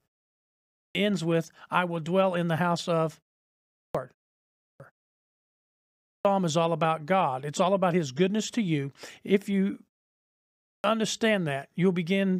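Clipped start after a pause occurs at 0.63, 3.63 (after "in the house of"), 4.49, 5.96 and 10.5 s. Each time the output sleeps in the silence and wakes late, swallowing 0.29 to 0.34 s. Speech then bursts in abruptly, as before "ends with I will" and "is all about".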